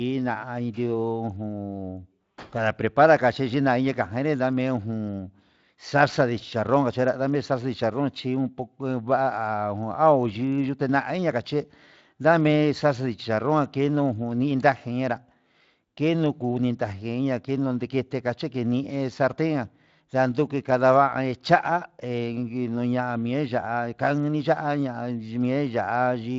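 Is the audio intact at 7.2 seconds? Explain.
Yes, the audio is intact at 7.2 seconds, with no fault at that moment.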